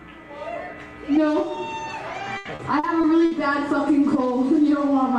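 From 2.37 to 3.33 s, repeated packet loss (robotic sound) breaks up the audio. Five gaps, the longest 80 ms, get patched by stretching the last sound. The result is choppy.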